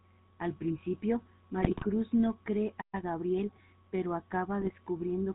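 From the start, the speech has the buzzy, gravelly roughness of the GSM full-rate codec at 13 kbps. The codec rebuilds the voice from a vocal-tract model driven by a sparse, regularly pulsed excitation, so fine detail is lost and the voicing takes on a rasping texture. Because the codec passes nothing above 4 kHz, a spectrogram shows energy ending at a hard ceiling there for the full clip, with coarse, grainy harmonics below it.

From 1.6 to 1.85 s there is a burst of GSM bit errors. Corrupted bits reached the decoder and scrambled its filter, pitch and gain parameters across several consecutive frames, which points to an error rate of one or two percent. The voice breaks into squawks, pops and gargling. On a spectrogram the band below 4 kHz turns into smeared, misplaced blotches of energy. The waveform shows sudden level jumps that change abruptly at frame boundaries.

At 2.81 s the sound cuts off completely for about 120 ms, until 2.95 s. 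This is a playback stall, likely caused by the player running short of data or its output thread being held up. The waveform drops to a flat line across the gap, and the spectrogram shows a clean vertical blank strip through every frequency.

From 2.95 to 3.75 s the player shortens its backlog with time-compressed catch-up, playing the speech about 1.15 times faster at unchanged pitch. It does this by cutting out small slices of audio and cross-fading across the joins. The speech sounds hurried. On a spectrogram the syllables look slightly squeezed together, while the harmonics stay at their usual heights.

A second, shorter burst of GSM bit errors hits between 4.61 and 4.71 s, at a somewhat heavier rate. It produces a brief squawk and pop, visible as a small patch of distorted spectral energy and an abrupt level spike in the waveform.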